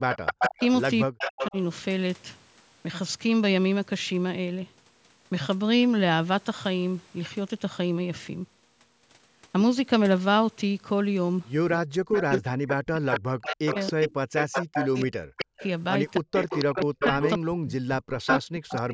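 From 0.10 to 0.66 s there is an echo leak, likely from a loudspeaker-side echo canceller letting its microphone pickup through. A copy of the speech trails it by 280 ms at about the same level. Overlapping it, from 0.21 to 1.55 s, is speech suppressed in double talk, likely the canceller ducking its own talker along with the loudspeaker echo. For roughly 0.7 s in total the speech sinks by up to about 40 dB or drops out in pieces. The 280 ms echo returns from 1.19 to 1.51 s, about 5 dB under the speech. It comes back again from 12.15 to 18.81 s, again about 5 dB under the speech. Suppression recurs from 11.76 to 15.61 s, hollowing out roughly 3 s, and from 16.20 s to the end, removing about 1.5 s.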